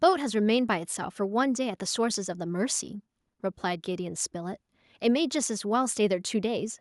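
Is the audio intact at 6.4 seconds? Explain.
Yes, the audio is intact at 6.4 seconds, with no audible fault at that moment.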